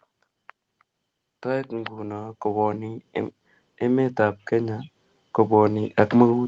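The speech and its background swell together from 0.66 to 3.11 s (about 8 dB), 3.79 to 4.91 s (about 4 dB) and 5.48 s to the end: automatic gain rising, as the gain control judged the input too quiet.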